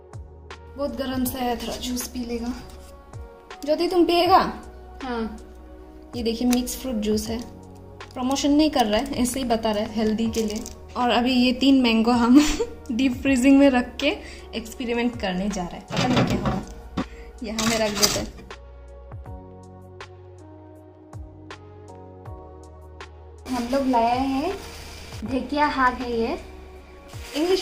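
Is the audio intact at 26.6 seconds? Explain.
Yes, the audio is intact at 26.6 seconds, with no dropout, click, distortion or other fault at that moment.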